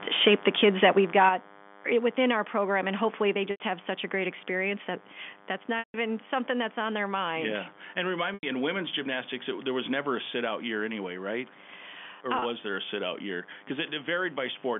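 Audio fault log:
throughout, DECT cordless phone buzz: a nearby DECT handset or base sends a radio burst every 10 ms, and the audio circuit rectifies it. The result is a steady, thin 100 Hz buzz with many harmonics, sitting about 25 dB below the speech.
0.12 to 1.29 s, microphone overload: the input volume was likely set too high, so the loudest peaks ran about 7 dB past the converter's limit. Their tops are cut off, putting a crackling, distorted edge on the loudest moments across this opening stretch.
0.28 s, 1.29 s and 3.33 s, microphone volume stepped down: the call software likely judged the microphone too hot and cut the input volume in single steps of about 2 dB, 7 dB and 2 dB. Speech and background drop in level together, the largest drop coming as the overload ends.
3.51 s, 5.79 s, 8.34 s and 12.39 s, packet loss with pitch repetition: audio went missing for 90, 150, 90 and 30 ms, which fits lost 30 ms packets. 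The receiver bridged each gap by repeating the last pitch period and fading it out, so the sound holds briefly with a buzzy tone before the speech returns through a short cross-fade.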